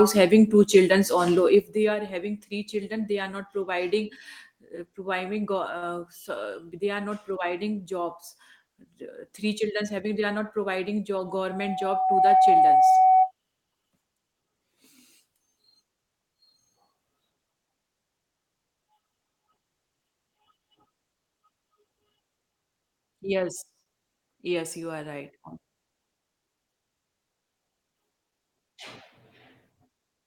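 It's a speech clip with a few faults. There are two short stalls from a late packet, at 5.77 to 5.84 s and 23.83 to 23.88 s: the jitter buffer ran dry and the last sound was held for about 46 ms and then 27 ms before carrying on. From 11.26 to 13.31 s there's a loudspeaker feedback squeal, a 753 Hz tone that swells over roughly a second to around 15 dB above the speech as the mic picks up its own speaker. At 18.87 to 19.13 s a jitter buffer speed-up trims around 50 ms of pitch periods, so the speech runs at 114% speed without changing pitch.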